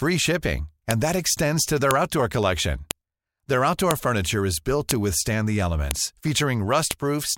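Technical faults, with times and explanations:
0.91, 1.91, 2.91, 3.91, 4.91, 5.91 and 6.91 s: file header played as audio. A sharp click lands every 1.0 s, at the join of each one-second piece of the speech. The few dozen bytes of each piece's WAV header were left in and reproduced as samples.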